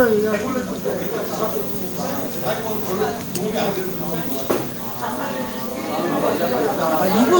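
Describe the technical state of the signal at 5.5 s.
At 5.5 s the sound plays through intact, with no dropout, clipping, glitch or other fault audible at that moment.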